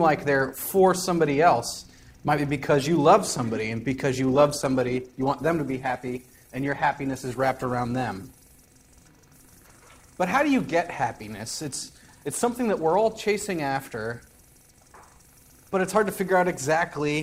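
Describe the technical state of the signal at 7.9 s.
Codec artefacts rise: an adaptive stream at a lower bitrate, from 4.28 to 8.28 s, switching without a gap to what sounds like roughly 16 kbit/s Opus.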